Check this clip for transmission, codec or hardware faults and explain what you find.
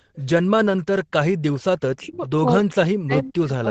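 Two call faults are audible in this speech clip, an echo leak and speech suppressed in double talk.

Echo leak appears twice, from 0.14 to 0.24 s and from 2.12 to 2.20 s. A faint delayed copy of the voice returns roughly 0.42 s late, about 30 dB below the speech. The likely cause is a loudspeaker on the far side whose echo canceller let some pickup through.

Speech suppressed in double talk occurs from 1.94 to 2.23 s, about 0.3 s in all, and again from 2.69 s to the end. The voice sinks sharply, by about 35 dB and then about 40 dB at worst. The likely cause is an echo canceller that could not separate talker from echo and turned both down.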